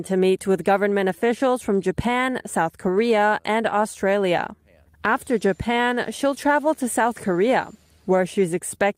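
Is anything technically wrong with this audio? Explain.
Yes. There are two related timing faults in this speech.

Clock drift between sender and receiver runs throughout. The sender's clock is about 3% slow, so the receiver's buffer keeps draining.

Repeated timing corrections occur from 0.04 to 8.75 s. The receiver repeats small pieces, slowing playback to 97%. This adds roughly 300 ms and is heard, if at all, as faint hiccups or an unsteady tempo.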